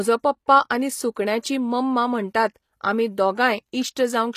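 Throughout the clip, the treble of the speech sounds synthetic: sibilants come out gritty and lispy, and nothing exists above 14.9 kHz. This is likely HE-AAC compression at a rate fitting about 24 kbps, rebuilding the top band from copied lower bands. A spectrogram shows repeated, blocky harmonic patterns above the crossover.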